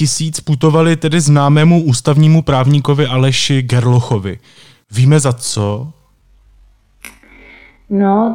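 At 5.35 s, just before "tak to je", the speech suddenly slows to about 0.52 times its pace, roughly half speed. This time-stretched section runs to the end of the clip at 8.35 s. The pitch does not drop with the tempo. Instead the speech drags. The likely cause is software stretching the audio to fill a length, repeating short pieces to hold the pitch steady.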